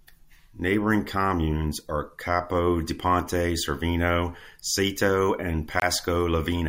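At 5.80 to 5.84 s the compressed speech stream carries damaged data: a short run of bytes is corrupted, so the decoder cannot make sense of the frames there, loses its lock on the frame structure and has to hunt for the next valid header before normal decoding resumes. For roughly 40 ms the speech is disrupted.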